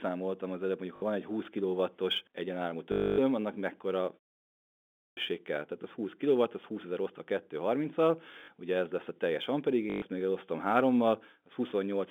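Speech heard over a telephone-band line, roughly 200 Hz to 3.5 kHz. A fine hiss and roughness rides on the speech throughout. It grows on loud passages and sharp high sounds and disappears in the pauses. That is sample clock jitter. The converter's clock wanders by something like a couple of microseconds, so each sample lands slightly off time. The error is worst where the waveform moves fastest, and it sits around 40 dB below the signal. There are short robotic stutters at 0.96 to 1.02 s, 2.92 to 3.18 s, 8.32 to 8.48 s and 9.9 to 10.02 s. These are packet loss with the last packet repeated. The receiver fills each gap by replaying the previous chunk. The longest gap, at about 260 ms near 3 s, buzzes steadily at about 50 Hz, which fits 20 ms packets. Around 8.3 s the losses are scattered over 160 ms in runs of up to 40 ms, so the stutter is broken up. At 4.76 s the speech starts abruptly out of a 0.65 s pause, missing about 410 ms of its beginning until 5.17 s. 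This is a clipped start after a pause. The output device had gone idle during the silence and had not woken up again in time for the speech.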